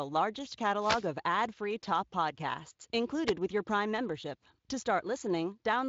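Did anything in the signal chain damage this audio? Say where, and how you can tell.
Yes: wireless microphone noise hits from the analogue radio link, ahead of the converter. A burst of static runs from 0.77 to 1.08 s, just before "ad free top podcasts", and a shorter swish from 3.26 to 3.31 s, between "ad free top podcasts" and "with your". As reflections cancel the FM carrier, receiver noise surges over the signal. A spectrogram shows broadband vertical smears up to the Speex codec's 7.6 kHz ceiling; the waveform shows fuzzy, hash-filled patches.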